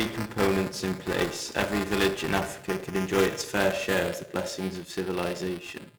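Buffer tearing runs through the whole speech clip. A robotic buzz at 375 Hz rides on the voice, which fits a 128-sample buffer. In each period, about a tenth holds audio from around 5 ms earlier. Hard joins bracket that stale slice.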